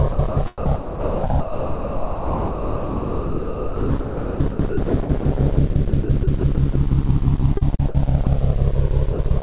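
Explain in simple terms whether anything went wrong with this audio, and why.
Yes, something went wrong: sound chopped by the voice detector. The sending side likely had a voice detector that kept switching transmission on and off. Each time it stopped, the receiver filled the gap with synthetic comfort noise. This happened from 0.09 to 5.25 s, where nearly four seconds of real sound were swapped out, and again from 5.55 to 6.75 s, 7.57 to 7.95 s and 9.13 to 9.39 s. The result is choppy sound.

There is also sound dropped by the voice detector. At 8.25 s the detector likely mistook a quiet bit of sound for background and stopped sending. The receiver played comfort noise instead, so a brief sliver of real sound disappears into steady noise before transmission resumes. Throughout, the call line carries nothing above 4 kHz, giving the sound its narrow, telephone-like quality.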